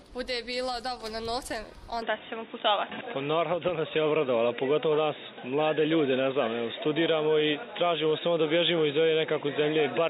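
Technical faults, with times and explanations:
2.02 s to the end: input switched to a poorer device, likely a change to another microphone or a headset's call profile. With no gap at the switch, the sound turns dull and boxy and steps about 5 dB in level, and a faint new noise floor appears far below the signal. On a spectrogram everything above 3.8 kHz vanishes at 2.02 s, leaving a hard ceiling, while the waveform's envelope shifts to the new level.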